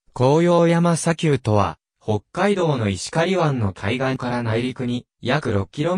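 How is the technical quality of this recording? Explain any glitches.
The recording has one clear glitch: channel delay (comb filtering) from 1.62 s to the end. One channel runs about 20 ms behind the other, and when the two are folded to mono, whatever they share cancels at evenly spaced frequencies. The lowest notch sits around 30 Hz, with further notches repeating up the spectrum, so from that point the sound turns rough and slightly doubled.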